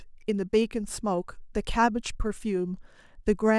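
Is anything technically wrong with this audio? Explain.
No, nothing technically wrong turns up here; the speech comes through without any audible problem.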